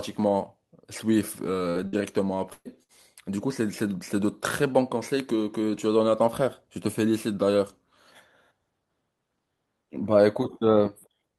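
Bursts of packet loss at 1.69, 1.87, 2.53 and 2.83 s interrupt this speech: each gap is filled with a fading hold of the last sound, then about 60 ms is skipped (120 ms at 2.53 s).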